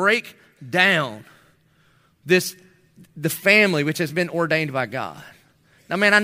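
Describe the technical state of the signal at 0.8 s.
At 0.8 s the speech signal is intact, with no audible fault at that point.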